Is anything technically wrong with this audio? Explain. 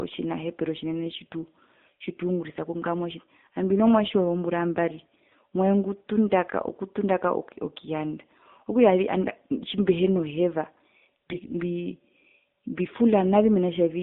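Yes. AMR narrowband mobile codec damage runs through the whole speech clip. The signal is sampled at 8 kHz and rebuilt from a vocal-tract model driven by sparse pulses, so only about 200 Hz to 3.7 kHz survives. The buzzy, synthetic tone points to a low mode around 7.4 kbps, where few pulses per subframe remain to excite the model. The harm is plainly audible: the voice sounds thin, boxed-in and robotic.

AMR bit errors, from 11.30 to 11.54 s: over roughly a quarter second, which fits about a dozen 20 ms frames, the weakly protected bits in each frame arrived corrupted while the checks on the core bits still passed. The bit error rate was around 7 percent. The decoder placed excitation pulses wrongly and used skewed gain and spectral values. Pitch and loudness roughly hold, but the voice turns hoarse, scratchy and gargly for that moment.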